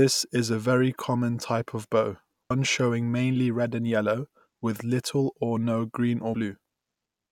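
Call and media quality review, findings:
Compressed frames skipped, 2.50 s: audio jumps ahead about a tenth of a second. Decoder dropping a handful of missing or damaged frames. Jump size fits roughly 21 ms codec frames.

Same thing at 6.34 s: another skip of about a tenth of a second. Likely the same decoder or packet-loss path.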